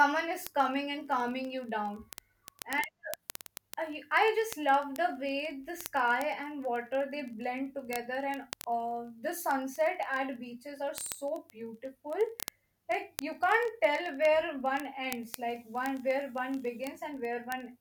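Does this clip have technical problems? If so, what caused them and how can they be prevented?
Yes. Word clock ticks run through the speech from 0.11 s to 17.80 s, sharp clicks about every 30 ms, roughly 700 in all. The receiving device runs on its own clock, around 700 ppm off the sender's, so each time the clocks slip past each other a single sample is dropped or repeated. Unlike random crackle or buffer dropouts, these ticks keep a steady metronomic rate with no gaps in the sound. To prevent them, lock the receiver to the incoming digital signal or to a shared word clock.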